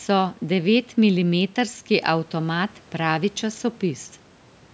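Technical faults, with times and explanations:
No technical faults can be heard in this speech. The room noise sits about 50 dB below the speech, and the call microphone processing leaves nothing above 8 kHz.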